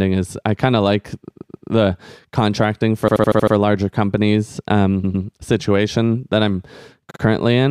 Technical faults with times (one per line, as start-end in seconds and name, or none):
1.29-1.69 repeated frames
3.07-3.54 repeated frames
5.03-5.24 repeated frames
7.09-7.20 repeated frames